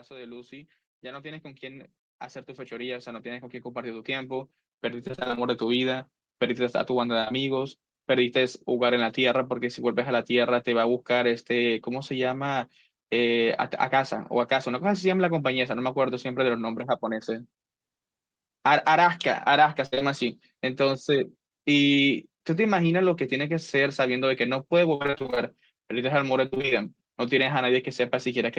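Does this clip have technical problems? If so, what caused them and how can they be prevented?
Yes. From 0.07 s to about 8.2 s there's automatic gain rising: the gain control decided the input was too quiet and ramped up by about 19 dB, so the voice and background swell together. Setting a sensible input level before the call, or giving the AGC a faster settle, avoids that slow climb.

There's also repeated packet loss (robotic sound) at 5.07–5.39 s, 7.21–7.32 s, 19.86–20.03 s, 24.95–25.38 s and 26.46–26.73 s. Packets kept going missing, and each hole was papered over by stretching the last sound, giving that choppy effect with pieces missing. A steadier network connection, or a deeper jitter buffer, would prevent it.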